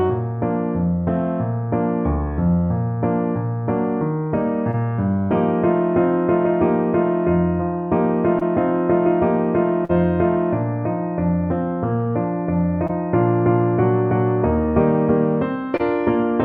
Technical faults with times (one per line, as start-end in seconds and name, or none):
4.71-4.75 short concealed packet loss
8.39-8.43 short concealed packet loss
9.85-9.91 short concealed packet loss
12.87-12.91 short concealed packet loss
15.77-15.81 short concealed packet loss